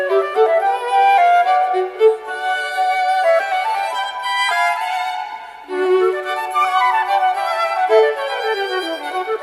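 Nothing stood out as a technical fault on listening to this clip.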